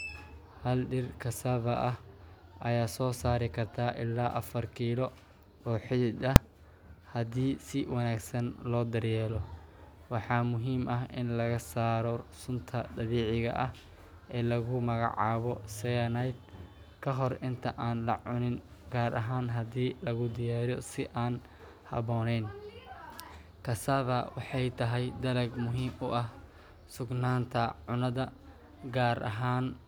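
Speech with invalid numbers at full scale at 6.36 s: a 2.67 ms block, fitting a 128-sample buffer, slams to the rails as one bang, a flat waveform slab and full-height spectrogram stripe.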